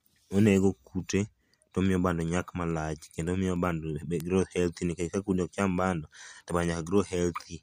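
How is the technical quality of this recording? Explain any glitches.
The speech is marred by word clock ticks from 0.15 s to 7.62 s: around forty sharp, uneven ticks about every 0.2 s. An unlocked digital receiver, drifting roughly 100 ppm, slips a sample at each clock crossing.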